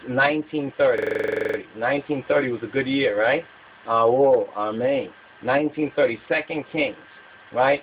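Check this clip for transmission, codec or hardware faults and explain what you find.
A system hang loop runs from 0.98 to 1.58 s. While the host or driver stalled, the playback hardware kept replaying the same ring buffer, so one 42.67 ms slice of sound repeats 14 times. The loop length fits a 2048-sample buffer, giving a harsh, rattling stutter at about 23.4 Hz. On a waveform, an identical short block repeats back to back. A spectrogram shows vertical stripes spaced about 43 ms apart. Essentially no audio is lost when normal playback resumes.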